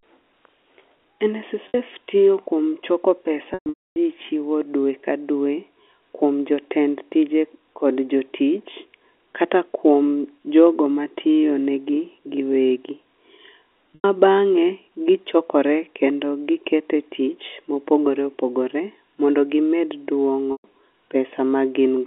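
Speech over a G.711 telephone line, with packet loss with pitch repetition at 1.68 s (60 ms), 13.95 s (90 ms) and 20.52 s (120 ms), where the receiver repeats the last pitch period, so you hear a brief buzzy held tone. There's also a scattered burst from 3.54 to 3.96 s, whose longest 270 ms gap fades to silence before cross-fading back.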